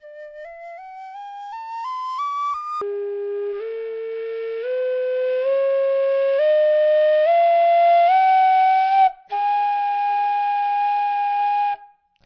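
From 2.81 s to the end at 12.26 s, the audio turns slow, heavy and deeply lowered, running at one third of its proper speed with the pitch dropped by 19 semitones, so everything drags. This is a wrong sample rate fault: the samples are being played back without conversion at a rate three times lower than they were captured at, which fits 48 kHz material being clocked out at 16 kHz, stretching time and lowering pitch together.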